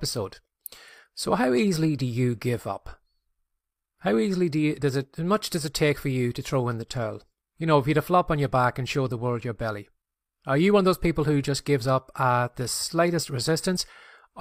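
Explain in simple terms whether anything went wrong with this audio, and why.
No faults can be heard.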